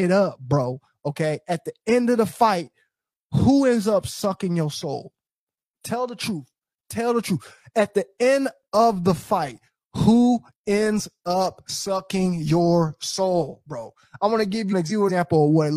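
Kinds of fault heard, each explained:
Frames out of order: from 14.71 to 15.11 s, two neighbouring blocks of about 186 ms each play swapped, which fits two runs of four frames. It gives a garbled flutter. Unlike a dropout or stutter, nothing is missing or repeated.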